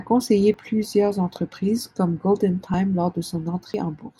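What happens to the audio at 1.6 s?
Nothing goes wrong at 1.6 s; the speech continues intact through that moment.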